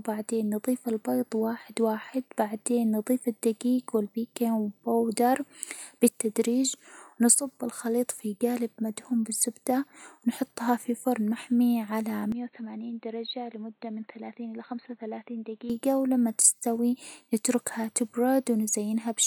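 Input switched to a poorer device, 12.32 to 15.70 s: the speech abruptly turns dull and boxy, with nothing above 4.2 kHz, drops about 10 dB and sits over faint new background noise. The likely cause is capture moving to a narrower-band microphone, with no gap at either switch.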